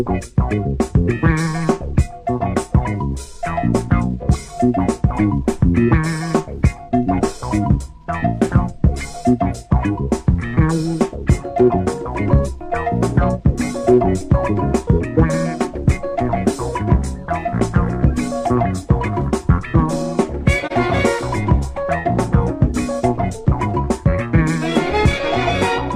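Around 20.66 to 20.72 s there's a short AAC frame loss with muting: a brief dip, roughly one frame's worth, where the decoder zeroed the spectrum and the overlapping windows faded out and in.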